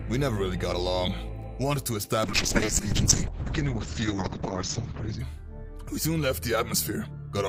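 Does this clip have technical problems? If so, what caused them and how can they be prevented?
Yes, there is a call bitrate drop from 2.24 to 5.25 s. The audio turns rough and muffled, with its top end cut from 20 kHz to 8 kHz. This fits the encoder falling from about 64 to 7 kbps after the bandwidth estimate collapsed. Prevent it with a steadier network path.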